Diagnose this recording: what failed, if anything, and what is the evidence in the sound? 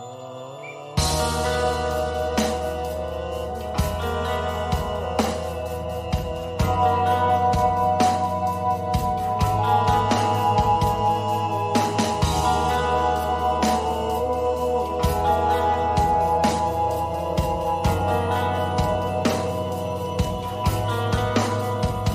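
Nothing in the recording points to a failure at any stage of the chain. No defect can be heard that would need a diagnosis.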